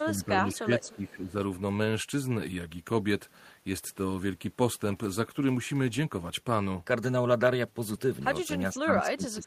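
From 0.0 to 1.38 s the speech dips by up to about 10 dB for roughly a second in total. This is speech suppressed in double talk, likely caused by the echo canceller turning down the near talker while both sides spoke.

Inside that stretch, echo leak is heard at 0.54–0.59 s, 0.83–0.93 s and 1.11 s. These are faint scraps of the voice about 440 ms late, at about 25, 25 and 35 dB below the speech, likely caused by loudspeaker pickup that the canceller did not fully remove.

At 4.87–4.93 s, 5.87–5.89 s and 7.95 s there is a lost packet rebuilt from error correction. The decoder played the low-bitrate copies of the lost audio, so there is no gap, but those 40 ms and 20 ms spans sound rougher and noisier. The 40 ms span fits two separate 20 ms frames.

From 8.69 s to the end, speech suppressed in double talk returns with a deeper drop of about 20 dB, likely the same suppression during simultaneous talk.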